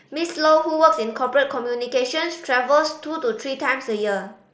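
No technical faults can be heard in this speech clip. It carries the sound of a Bluetooth mSBC headset link, with the speech limited to about 8 kHz, a light grainy texture on louder sounds, and faint upper bands that come and go.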